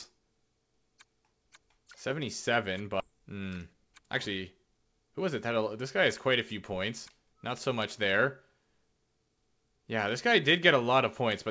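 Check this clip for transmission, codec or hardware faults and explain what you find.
Two transmission faults stand out, and the G.722 path leaves nothing above 8 kHz.

Skip ahead at 3.0 s: roughly seven tenths of a second of audio was discarded while later audio waited, so playback jumps forward with no gap in between.

Jitter buffer speed-up from 3.12 to 5.57 s: the receiver trimmed repeated pitch-period slices, about a fifth of a second in total, so the audio runs 109% fast at unchanged pitch and sounds hurried.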